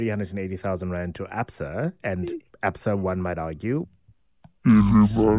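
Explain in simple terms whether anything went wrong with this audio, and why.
Something does go wrong, right after "one might argue", at about 3.85 s and lasting to the end at 5.39 s. The sound suddenly drops to half speed and a full octave lower, so everything turns slow and deep. That's a wrong sample rate: the audio is played back slower than it was captured, with nothing correcting for it. An exact halving like this fits audio recorded at 16 kHz being played at 8 kHz.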